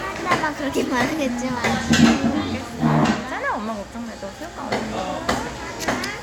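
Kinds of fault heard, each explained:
Nothing stood out as a fault on listening to this recording of sounds.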